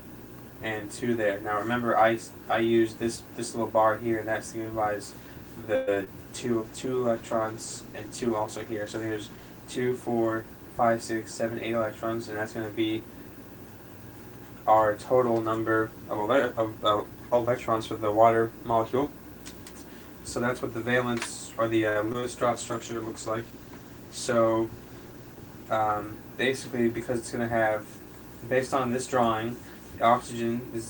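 A video or display buzz runs under the whole clip. A screen or video cable is coupling into the audio. The buzz sits at the 59.94 Hz field rate, about 20 dB below the signal, with hash above it. A thin 15.7 kHz line-rate whine rides on top.

From 5.75 to 6.08 s there is repeated packet loss, heard as robotic sound. Three holes open in quick succession; the longest lasts 118 ms. The receiver patches each one by extending the last sound. Nearly half the stretch is patched, so it turns choppy.

At 6.30 s a call bitrate drop sets in, lasting until 11.08 s. The bandwidth estimate fell, taking the encoder from 32 to 14 kbps. It stays at the bottom for about 3.2 s. The sound goes rough and watery, and the top end dulls.

A jitter buffer speed-up follows from 16.52 to 17.76 s. Too much audio had built up in the buffer. Short pitch-period slices, about 150 ms in all, are cut out. Playback runs at 110% speed. 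The pitch holds, but the sound feels hurried.

The pattern then repeats. Repeated packet loss returns from 21.89 to 22.24 s with three gaps, the longest 66 ms. About 30% of that span is concealed. A second bitrate drop runs from 22.52 to 26.48 s, from 32 to 15 kbps, with the low point held about 3.1 s. Finally, from 27.22 to 28.07 s, another speed-up trims about 70 ms and plays at 108%.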